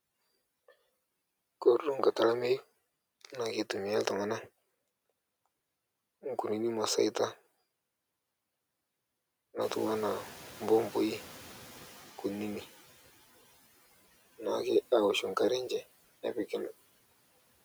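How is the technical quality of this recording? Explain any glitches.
The recording has one glitch, a noise suppressor catching up after the room noise jumps by about 17 dB around 9.5 s. From 9.61 to 12.7 s the suppressor's estimate lags, so the noise first comes through with less reduction, then sinks by about 10 dB over 3.09 s. Unlike a gate, it fades smoothly rather than switching.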